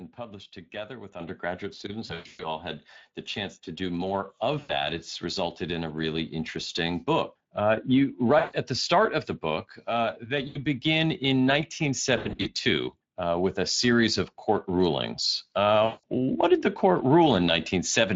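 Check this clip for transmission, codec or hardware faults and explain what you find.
Three faults are audible: Speex coding throughout, one stepped rise in microphone level, and six bursts of concealed packet loss.

Speex codec, whole clip: the speech was carried through Speex, a CELP coder running here at roughly 20 kbps. The damage is plainly audible: the speech sounds noisy and hoarse.

Microphone volume stepped up, at 1.20 s: the call software judged the input too quiet and raised the device gain in one jump of about 8 dB. Speech and background noise step up together, abruptly, with no fade.

VoIP packet loss concealed by the speech codec, at 2.07–2.44, 4.59–4.73, 8.39–8.55, 10.47–10.58, 12.17–12.48 and 15.85–16.05 s: lost packets forced the decoder to extend its last pitch and filter while lowering the gain. Each gap becomes a fading buzzy tone or coloured noise, lasting 80 to 180 ms for the single gaps. 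The first and fifth bursts are scattered dropouts of about 260 ms over 320 ms and 200 ms over 280 ms, with gaps of up to 120 ms. Speech stays weak for a while after each one.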